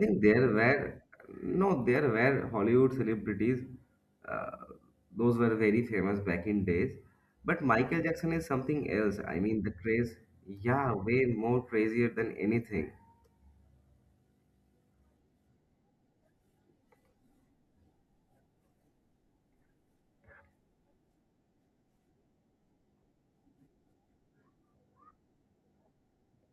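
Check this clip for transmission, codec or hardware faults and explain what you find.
Nothing in this speech recording points to a transmission, codec or hardware fault.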